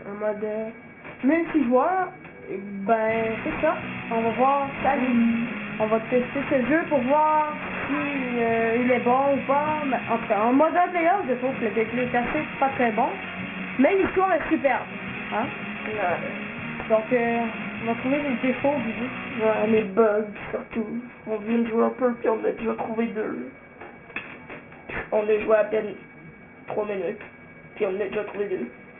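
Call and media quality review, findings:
Aliasing, whole clip. Gritty, metallic highs with spurious tones unrelated to the sound. Band stops hard near 3 kHz, where the folding occurs. Aliases fairly strong, roughly 15 dB below signal. Probable component: resampler. Mechanism: downsampling without an anti-alias filter. The fold point suggests a rate of about 6 kHz. Content above 3 kHz is mirrored back below it.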